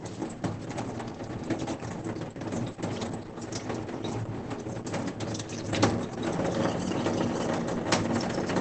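Throughout, the sound is muffled, hoarse and cut off above 8.7 kHz, likely from Opus compression in its speech mode at about 12 kbps.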